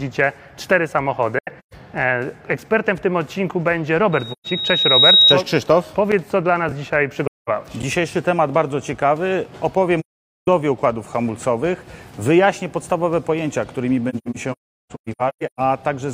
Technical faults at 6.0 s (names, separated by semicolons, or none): none